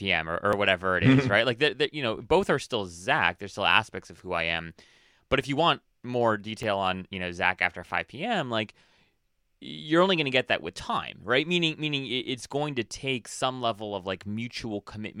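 A dropped buffer (overrun) at 0.53 s and again at 6.63 s makes the speech jump forward, with no gap of silence. The likely cause is the recording software falling behind so the hardware overwrote samples before they were collected, and the audio on either side of each loss was joined directly. About 3 ms vanishes at the first point and roughly half that at the second, too little to take away part of a word.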